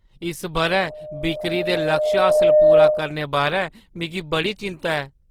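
A short piece of speech with two problems. From 0.61 s to 3.21 s there's a loudspeaker feedback squeal: a single 610 Hz tone that climbs over roughly two seconds until it sits about 10 dB above the speech, then stops. That's the mic hearing its own loudspeaker, with the loop gain tipping past one at 610 Hz so the tone keeps feeding itself until the loop is broken. Underneath, for the whole clip, there's a grainy, rough quality on the voice that's plainly audible, which is likely Opus compression in its music mode at around 16 kbps. At that rate the encoder keeps each band's energy but can't spend enough bits on detail, so it fills bands with folded or noise-like content, which gives the roughness rather than a swirly MP3 character. The bandwidth hasn't collapsed, though, since content still reaches about 20 kHz.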